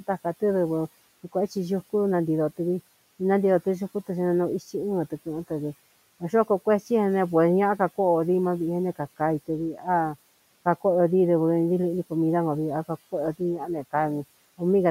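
The noise suppressor misjudged parts of the speech as noise twice, causing speech cut by the noise suppressor. From 9.72 to 9.88 s it pulled the level down by about 10 dB, and from 13.39 to 13.94 s by about 12 dB, each time briefly swallowing the speech for a fraction of a second. Those moments drop out faint and muffled against the room noise, which sits about 24 dB below the speech.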